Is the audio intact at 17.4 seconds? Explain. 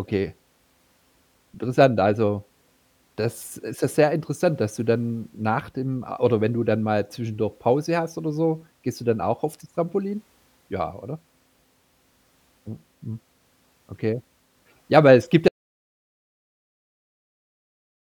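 No. At 17.4 s the speech sits inside an audio dropout to silence that runs from 15.48 s to the end. It cuts off abruptly into silence with no room tone, unlike a fade or noise gate, likely because the input was lost while recording continued.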